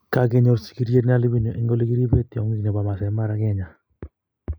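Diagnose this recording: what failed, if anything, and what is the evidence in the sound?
From 0.97 s to the end, the speech turns thin and hollow, with the upper presence dulled as though a fixed notch sits around 5 kHz. That is channel delay (comb filtering), arising at the driver or buffer stage: one channel arrives roughly a tenth of a millisecond late, a few samples, and the mono fold-down sums it with the other, so content common to both cancels at evenly spaced frequencies, the first near 5 kHz.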